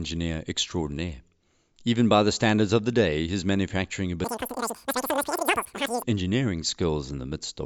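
From 4.24 s to 6.03 s, right after "the day his manufacturing", the speech suddenly becomes squeaky and rushed, running about 2.76 times too fast and roughly 17.6 semitones high. This is a wrong sample rate fault: the samples are played back at a faster rate than they were captured, with no conversion, so speed and pitch rise together by the same ratio. The ratio fits 16 kHz audio played out at 44.1 kHz.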